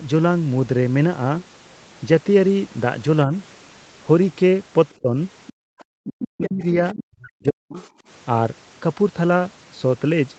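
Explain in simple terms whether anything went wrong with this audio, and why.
Several things go wrong in the middle of this speech clip, all between about 4.9 and 7.9 seconds.

First, there is other side's voice leaking through. A second, fainter voice slips in at 4.89 to 4.94, 5.47 to 5.84, 6.44 to 7.04, and 7.77 to 7.86 seconds. It stays quieter than the main talker, and it is clearest at 6.44 to 7.04. The likely cause is that the talker's loudspeaker was playing the far end, and the echo canceller did not fully scrub it from the microphone.

Second, there is speech suppressed in double talk. At 5.02 to 5.14 seconds the talker's voice dips briefly. From 6.04 to 7.78 seconds it sinks much further, almost cutting out, for about a second and a half. This overlaps the strongest leak. Both sides were likely talking at once. The canceller could not tell the talker from the echo, so it turned everything down.

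Third, there is background gated by the echo canceller. From 5.53 to 5.76 seconds the room sound nearly vanishes for about a fifth of a second, then comes back. That happens while the loudspeaker sound is leaking in. The canceller clamps the microphone hard while it hears its own speaker, and the room tone drops away with it.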